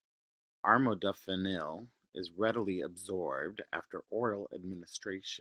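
No technical faults can be heard in the speech; the only audible processing is the Opus voice compression, whose coding leaves just light traces across the full band.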